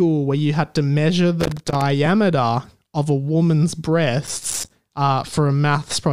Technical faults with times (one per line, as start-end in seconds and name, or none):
1.40-1.81 loose connector crackle
4.26-4.70 loose connector crackle